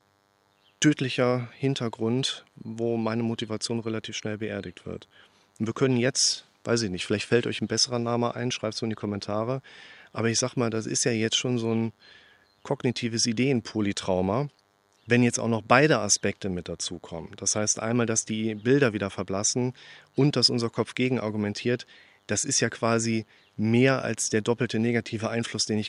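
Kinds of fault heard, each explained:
DECT cordless phone buzz: a nearby DECT handset or base transmits radio bursts every 10 ms that the audio circuit rectifies, leaving a thin, harmonic-rich 100 Hz buzz far below the speech throughout.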